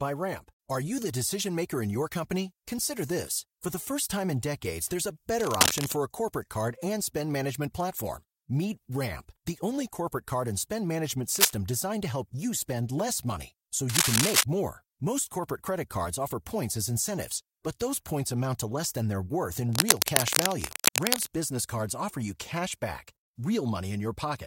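Bursts of scratchy, rustling noise rise a few decibels above the speech at 5.39–5.93 s (after "in decades there's a"), 11.35–11.53 s, 13.89–14.44 s and 19.73–21.29 s. This cable scratch noise likely comes from a worn cable or connector moving, its contact resistance jumping erratically.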